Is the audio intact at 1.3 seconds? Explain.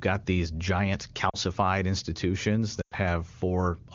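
No. From 1.29 to 1.36 s there are lost AMR speech frames: about 40 ms of speech, which fits two 20 ms frames, failed to arrive intact, so the decoder reused the last good pitch and vocal tract settings while lowering the gain. The speech briefly drops to near silence, then comes back weak or rough for a moment. On a waveform the envelope sags; a spectrogram shows the harmonics held flat and fading instead of following the surrounding HD Voice speech.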